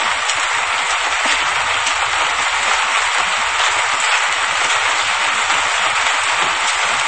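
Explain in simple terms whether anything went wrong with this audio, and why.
Something did go wrong here, for the whole clip: nothing comes through above 8.3 kHz, so the sound is dull and muffled. It's likely low-bitrate audio saved at a high bitrate. A heavily squeezed MP3 was re-saved larger, and that can't restore what was lost.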